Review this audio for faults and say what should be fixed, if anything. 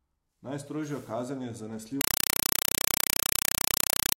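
From 2.01 s to the end at 4.17 s, an AC-3 bitstream reached the output undecoded and was played as ordinary samples: compressed stream played as audio. Each frame becomes a 4 ms noise burst followed by silence, 31.25 times a second, so loud chattering static replaces the speech. To prevent it, have the receiving device decode the stream, or set the source to output PCM.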